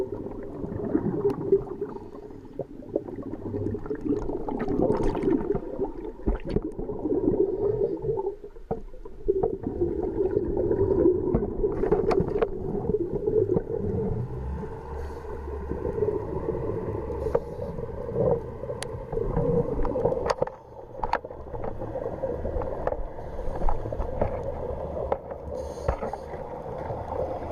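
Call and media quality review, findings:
No technical faults were detected in this everyday-sound recording, and the signal shows no dropouts, distortion or other path problems that would warrant a ticket finding.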